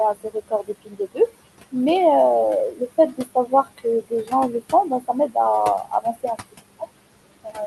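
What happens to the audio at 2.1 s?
At 2.1 s the noise suppressor artifacts are present, as they are across the whole clip. The suppressor cuts bands it judges to be steady noise by about 20 dB, frame by frame. The room noise, about 14 dB below the speech, drops between words and swells back under them.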